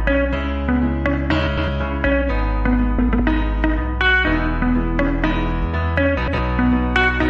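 Frames out of order occur at 1.47 to 1.68 s, 2.99 to 3.20 s and 6.17 to 6.38 s. Each time, two adjacent blocks of about 104.5 ms, which fits runs of four frames, were decoded in swapped order, so the later half plays before the earlier. The result is a brief garbled flutter. Nothing is lost, and timing continues unchanged afterwards.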